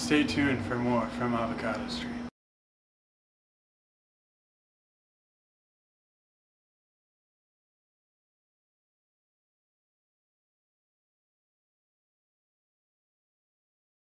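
Nothing is technically wrong with this audio.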